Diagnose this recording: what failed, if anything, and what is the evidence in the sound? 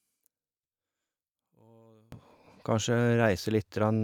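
From 0 to 2.12 s the speech sinks about 30 dB to a faint residue; likely one channel inverted in analogue wiring, cancelling on mono sum.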